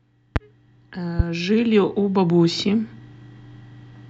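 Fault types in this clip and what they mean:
Loud pop: a sudden voltage pulse, likely from a switch, plug or static, adds sharp pops at 0.36 s and 1.19 s, about 15 dB above the speech.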